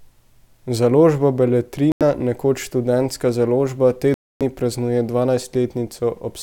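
Speech with two clean gaps of silence, at 1.92 to 2.02 s (89 ms) and at 4.14 to 4.42 s just after "založba te" (266 ms), likely a Bluetooth stall, where the headphone buffer runs dry awaiting resent packets. Unlike concealed packet loss, nothing fills the gaps.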